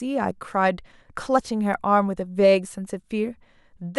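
Two brief glitches interrupt this speech clip, at 0.31 s and 2.65 s, each with a small forward jump where the sound joins up abruptly instead of pausing. The first skips about 10 ms, the second only a few milliseconds. This is likely a dropped buffer (overrun): samples weren't read before the hardware overwrote them, so a short stretch of audio vanished and the surrounding sound was spliced together.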